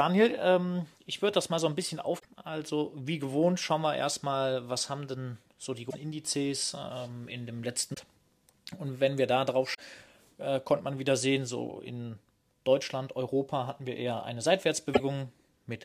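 Damaged data in a compressed stream breaks the sound five times: 2.16 to 2.25 s, 5.87 to 5.95 s, 7.93 to 7.99 s, 9.73 to 9.80 s, and 14.90 to 15.00 s. Each lasts under a tenth of a second. Bytes in the coded stream were lost or corrupted. The decoder misreads those frames, loses its place and hunts for the next valid frame header. Each event comes out as a chirp, squawk, click or short hole cutting into the audio.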